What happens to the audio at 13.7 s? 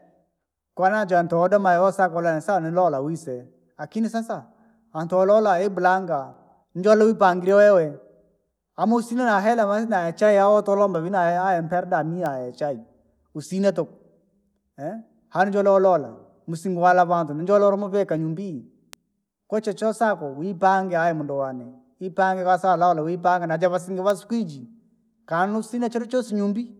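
Nothing goes wrong at 13.7 s; the speech carries on intact through that moment.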